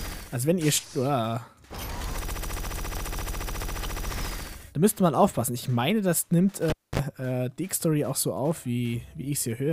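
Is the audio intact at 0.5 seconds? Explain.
Yes, the audio at 0.5 seconds is intact, with no dropout, click, distortion or other fault at that moment.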